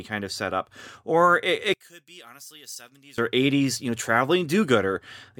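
From 1.74 to 3.18 s the speech drops by about 22 dB and turns faint, likely one channel inverted cancelling the centre in mono.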